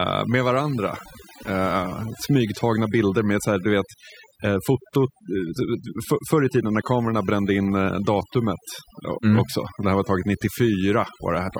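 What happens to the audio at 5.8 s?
At 5.8 s the speech carries overdone noise removal, present across the whole clip. An overly aggressive noise reducer pulls individual frequency bands down whenever they sit near its noise estimate, so quiet speech detail vanishes too. Pauses drop to near silence with twinkling specks. A spectrogram shows scattered isolated dots in the gaps and holes eaten into the speech harmonics.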